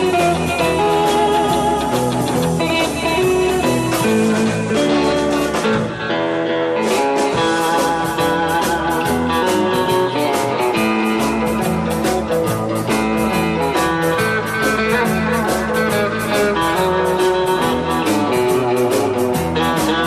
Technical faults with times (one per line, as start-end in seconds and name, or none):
none